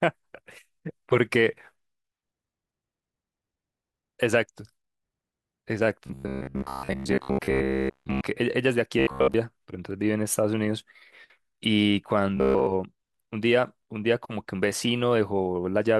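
Audio was likely arriving too seldom, so a roughly 15 ms buffer was replayed while most real audio was skipped. This robotic sound from repeated short buffers, at 6.07–8.21 s, 8.99–9.34 s and 12.37–12.67 s, becomes a rigid metallic buzz at 66.8 Hz.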